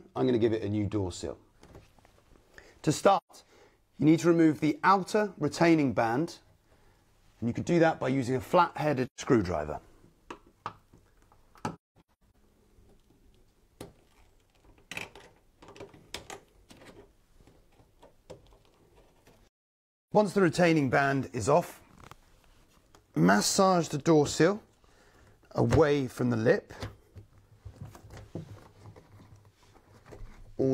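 Four dropouts from AAC frame loss with muting occur at 3.17–3.31 s, 9.06–9.20 s, 11.75–12.35 s and 19.48–20.12 s. The first two last 128 ms, which fits three lost frames. The third is a scattered cluster of short holes, the longest about a fifth of a second. The last is a single 640 ms gap. The decoder zeroed the missing spectrum, so overlapping windows fade the sound smoothly out and back in. On a spectrogram these appear as full-band blank columns with soft edges, and in the waveform as tapered silences.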